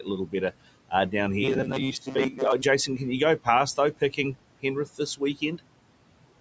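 Noise suppressor artifacts run through the whole speech clip. The suppressor pulls the steady room noise down by about 18 dB between phrases and lets it back up under the talking, so the leftover background pumps frame by frame. Speech cut by the noise suppressor occurs at 3.77 to 4.18 s and again at 5.17 to 5.6 s. In each case the suppressor mistook quiet parts of the speech for noise and ducked them by about 18 dB and 16 dB respectively, swallowing roughly a tenth of a second of soft sound in each window so it comes across faint or clipped off.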